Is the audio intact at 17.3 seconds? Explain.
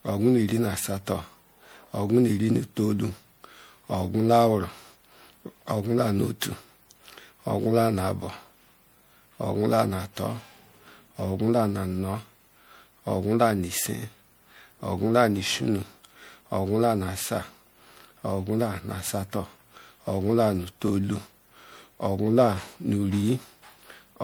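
No. Generation loss runs through the whole clip, including 17.3 s: the speech sounds swirly, smeared and hollow, with blurred attacks. The likely cause is about five rounds of MP3 decoding and re-encoding at 96 kbit/s, each pass adding fresh quantisation noise and spectral holes.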